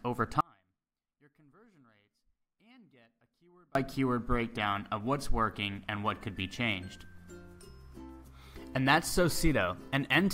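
An audio dropout to a faint residue runs from 0.41 s to 3.75 s, about 3.35 s in all. The sound cuts out abruptly and comes back just as suddenly, not as a pause or fade. Through the gap only a faint leak of the sound remains, roughly 35 dB below its normal level. The likely cause is the wanted signal being lost upstream while the path after the break stayed live and kept passing that trace.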